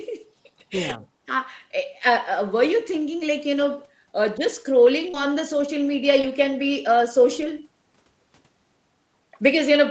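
At 0.89 to 0.91 s and again at 3.19 to 3.21 s, there is a lost packet rebuilt from error correction. Each time one 20 ms packet went missing. The next packet carried a low-bitrate copy of it, and the decoder played that copy instead. Nothing drops out. The sound just turns briefly rougher and grainier.

From 5.09 to 5.15 s comes a short concealed packet loss. About 40 ms never arrived in time. The receiver extended the last sound, by pitch where voiced and as shaped noise where not. It is heard as a quick smear or wobble. Its last 20 ms, from 5.14 to 5.15 s, were rebuilt from the error-correction copy, so the gap ends in that rougher texture.

At 6.22 to 6.25 s the same pairing recurs on a smaller scale. A 20 ms hole is concealed first, heard as a brief smear or wobble. The error-correction copy then takes over from 6.23 s.

At 7.41 to 7.43 s a final single packet is rebuilt from error correction, again a 20 ms patch of coarser, noisier sound.

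The audio of this Opus call stops at 8 kHz throughout.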